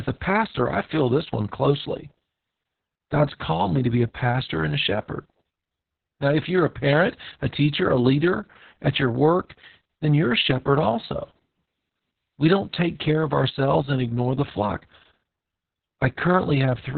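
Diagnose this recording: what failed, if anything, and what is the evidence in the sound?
The failure is at the codec stage: Opus voice compression, heavily damaged, throughout. Nothing sounds above 4.4 kHz, so the speech is muffled, hoarse and slightly robotic. That points to SILK running narrowband at a very low bitrate, around 6 kbps, coding the excitation coarsely.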